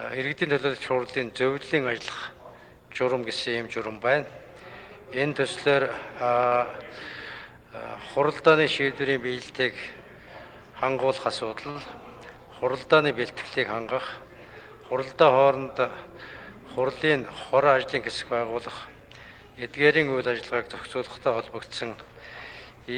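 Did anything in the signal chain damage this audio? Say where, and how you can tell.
Yes, at the network stage: two short stalls from a late packet, at 6.47 to 6.54 s and again at 11.71 to 11.77 s. Each time the jitter buffer ran dry, so the receiver held the last sound for about 41 ms and then resumed where it left off. Nothing is lost, but playback ends up 82 ms later. On a spectrogram each stall shows as a brief frozen, horizontally smeared band; the waveform shows a repeated cycle.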